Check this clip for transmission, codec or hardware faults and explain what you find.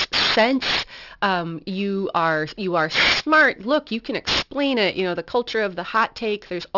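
The speech shows aliasing from start to finish. It was resampled downward with no anti-aliasing filter, likely to a 12 kHz rate. Energy above 6 kHz folded back below that edge, leaving sibilants gritty and metallic, with false tones only a few decibels under the speech.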